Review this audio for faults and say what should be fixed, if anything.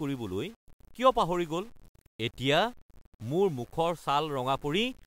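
Grainy distortion runs throughout the speech, likely low bit depth without dither, fitting 8-bit rounding. Unlike steady hiss, it follows the signal and roughens quiet passages.

To prevent it, keep the audio at 16 bits or more, and apply dither whenever word length is reduced.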